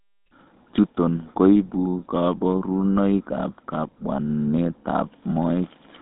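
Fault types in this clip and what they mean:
GSM full-rate codec, throughout: the speech is rebuilt from a vocal-tract model excited by evenly spaced pulses, giving a plainly audible buzzy, gravelly roughness, which fits a 13 kbps stream. The line spans about 200 Hz to 3.7 kHz, with nothing above 3.8 kHz.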